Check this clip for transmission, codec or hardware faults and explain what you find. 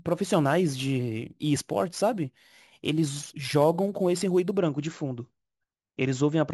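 One fault is present: imaging from sample-and-hold upsampling, from the start to 4.58 s. The speech was raised from 16 kHz to 44.1 kHz by holding each sample with no smoothing filter, so a mirrored copy of the band appears between 8 and 16 kHz, about 20 dB below the speech. It sounds like a bright metallic fizz that rises and falls with the voice, which distinguishes it from steady hiss. Its pitch moves against the voice's, which distinguishes it from a genuine high-frequency component.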